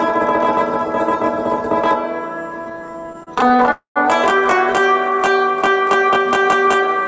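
From 2.62 to 3.69 s there are repeated stalls, a stutter. The sound halts 28 times, each gap 30 ms at most. Late packets kept emptying the jitter buffer, and the receiver filled each wait by continuing the last sound. About 311 ms was filled this way, 29% of the span. Nothing is lost, but the audio drags and judders.

At 3.71 s a call audio freeze follows, lasting until 3.98 s. The sound is held and carried on by the receiver for 246 ms, fading into 120 ms of silence within that time, before resuming where it stopped. The likely cause is packets held up in transit, so a 246 ms gap is inserted and nothing is missing. The G.722 call path leaves nothing above 8 kHz.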